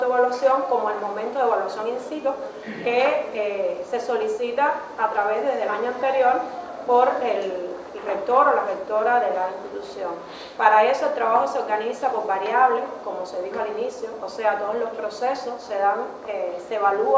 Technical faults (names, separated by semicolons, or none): none